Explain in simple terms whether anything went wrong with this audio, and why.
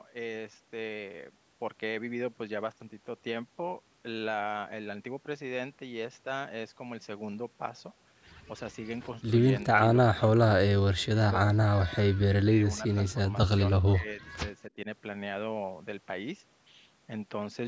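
Around 9.7 to 14.9 s the speech keeps dipping or cutting out: at 9.7 s, 10.1 to 10.4 s, 10.6 to 11.3 s, 11.6 to 11.9 s, 12.1 s, 12.4 to 14.2 s, and briefly at 14.7 s. That's likely speech suppressed in double talk. Both sides were talking, and the echo canceller turned this talker down along with the echo.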